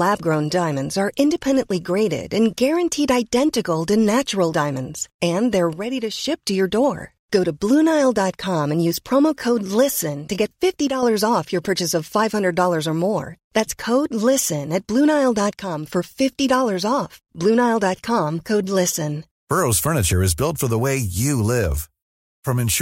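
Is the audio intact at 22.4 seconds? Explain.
Yes, at 22.4 seconds the speech plays through cleanly, with no dropout, click, distortion or other fault at that moment.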